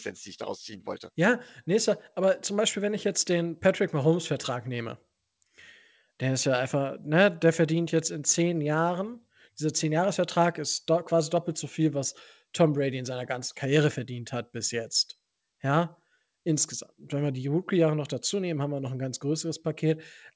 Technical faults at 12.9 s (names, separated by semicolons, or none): none